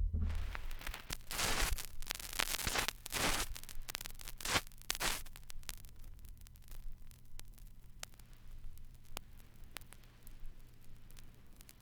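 No technical fault can be heard anywhere in these everyday sounds. Nothing in the recording calls for a timestamp or a closer listen.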